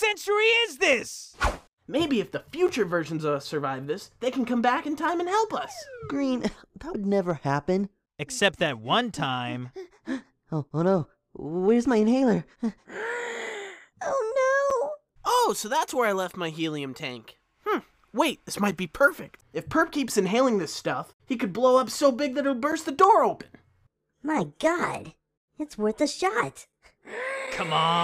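Gaps between chunks at 2.68, 14.70, 18.71 and 22.72 s: the audio arrives in 4-second pieces, and each join leaves about 7 ms of silence. Nothing is lost, but the sound breaks into brief, hard-edged holes at regular points.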